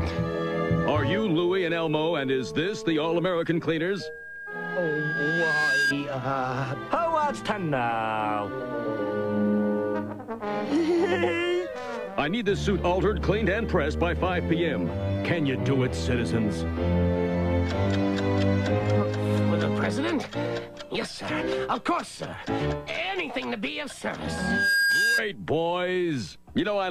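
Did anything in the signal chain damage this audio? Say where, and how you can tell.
Yes. The damage comes from the analogue side, where a microphone is hearing the loudspeaker it feeds, so you get loudspeaker feedback squeal. A single 1.6 kHz tone swells up from 3.84 to 5.94 s, taking roughly two seconds to build, and it comes back from 24.25 to 25.23 s, climbing much faster, in about half a second. Both times it ends up roughly 5 dB above the programme. That's the loop gain at 1.6 kHz going past one and the tone feeding itself.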